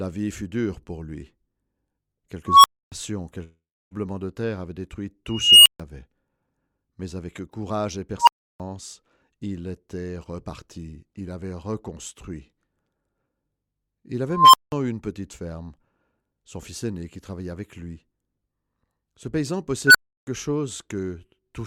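At 2.46 s a tone near 1 kHz swells sharply over about 0.18 s, hits clipping, and then the audio cuts out for about 0.28 s. The same beep-then-silence pattern returns four more times. At 5.29 s a higher tone near 3 kHz climbs more slowly, over about 0.37 s, before a 0.14 s gap. At 8.19 s a tone near 1 kHz rises within about 0.08 s and leaves a 0.33 s gap. At 14.30 s a tone near 1 kHz builds over about 0.24 s and is followed by 0.19 s of silence. At 19.87 s a tone near 1.5 kHz rises in about 0.07 s, with 0.33 s of silence after it. Each one is an unstable filter. A recursive stage with bad coefficients feeds its own output back and grows until it saturates and overflows. The sound then drops out until the filter resets.

Between 3.43 and 3.94 s the last sound smears into a fading buzz, then gives way to about 0.29 s of silence. When the audio resumes, roughly 0.48 s of material is missing. 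This is likely a long network dropout. No packets arrived, so the receiver extended the final sound as concealment before giving up, and the lost stretch was never played.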